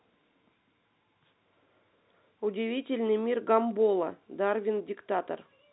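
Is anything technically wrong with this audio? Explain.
No, nothing is technically wrong with this audio.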